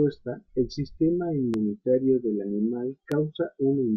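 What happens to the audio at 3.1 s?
At 3.12 s, just after "del animal", a single loud pop cuts through the speech. It lasts until about 3.14 s, roughly 20 ms. It peaks about 10 dB above the speech, so it stands out sharply. The likely cause is a sudden voltage step or pulse entering the signal, from a plug, switch, static discharge or driver glitch. Downstream circuits shape that pulse into a brief thump. The speech carries on underneath it.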